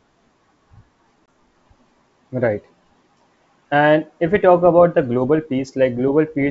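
At 1.26 to 1.28 s, a 20 ms hole cuts the speech, about one packet lost on an ADPCM call. The gap is hard-edged silence. The decoder's predictor and step size then lag the sender's, so speech resumes slightly distorted before settling. Around it, the G.722 wideband coding sounds clean up to 7 kHz, which fits full-rate 64 kbit/s.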